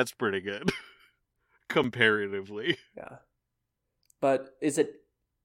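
A gap between stream segments occurs at 1.84 s, where the speech drops into a brief hole of silence with abrupt edges on both sides. The timestamps of two adjoining segments fail to meet, so the player pads the space between them with silence instead of continuing the sound. Here the hole adds about 6.7 ms, which fits a join between 4-second segments. Nothing is lost, but the speech is briefly cut off.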